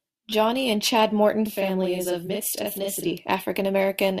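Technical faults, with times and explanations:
1.46–3.06 s, channel delay (doubling): one channel runs about 43 ms late, which fits a 2048-sample buffer, and the mono sum makes speech sound doubled with a slap.
2.27–2.30 s, corrupt frame concealed: the decoder detected a damaged AAC frame and covered it, affecting one frame.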